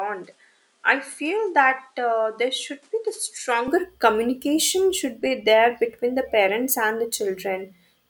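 For the first 3.68 s the speech sounds duller and a little boxy, with nothing above 11.4 kHz, a level a few decibels lower, and a faint added noise roughly 35 dB under the signal. At 3.68 s the sound opens up and grows louder with no gap at the change. This is likely an input switched to a poorer device: the recording began on a narrower-band microphone with its own noise, then moved to a better one.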